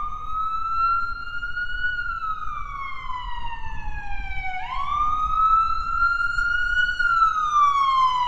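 No technical faults are audible anywhere in the audio.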